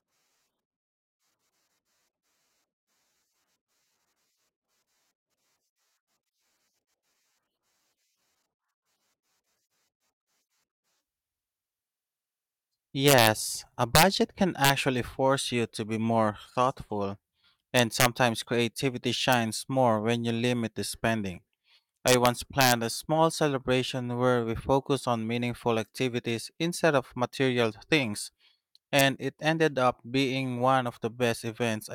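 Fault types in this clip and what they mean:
Integer overflow: the loudest speech peaks exceeded the largest integer the format holds and wrapped to the opposite sign instead of being limited, overshooting by up to about 5 dB. Seven sharp cracks result between 13.08 and 29.0 s, including one just before "force you to be" and one leading into "a small celebration where". On the waveform, peaks flip abruptly to the opposite sign; the spectrogram shows full-band vertical streaks.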